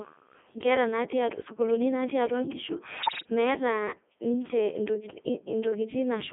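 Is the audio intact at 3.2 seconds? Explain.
No. At 3.2 s you're inside a burst of bit errors on digital voice radio, running from about 3.00 to 3.30 s, right after "sukuuli natii atua nkishu" and before "meeta ninche". Flipped bits, on the order of 7 percent, are landing in a very low-rate vocoder stream where each bit steers a whole frame's pitch, level, voicing or spectrum. You hear the voice lurch in pitch and loudness and dissolve into warbly, bleepy gibberish, which fits roughly a dozen corrupted frames.

That burst sits on top of the Codec 2 vocoder that's active for the whole clip, here at 3.2 kbit/s. Codec 2 doesn't keep the waveform. It sends only pitch, voicing, energy and a spectral envelope, then rebuilds the voice from sine waves. So even outside the error burst the speech comes out heavily robotic and buzzy, squeezed into a narrow band of roughly 250 Hz to 3.5 kHz.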